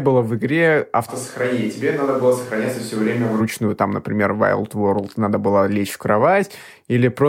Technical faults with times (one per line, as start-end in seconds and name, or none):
1.10-3.39 switch to a distant microphone